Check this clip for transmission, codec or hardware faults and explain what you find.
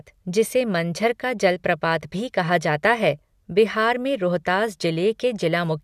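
No transmission, codec or hardware faults can be heard in this speech recording.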